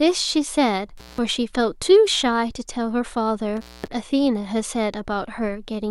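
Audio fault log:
0.97–1.18 s and 3.57–3.88 s, intermittent contact: the speech cuts out twice, for about 176 ms and then 229 ms, as a loose plug or cable briefly breaks the signal path. Crackle marks the edges of each gap, and faint hiss remains while the line is open. That ragged crackle and residual hiss distinguish it from a digital dropout, which falls to clean silence with sharp edges and no noise.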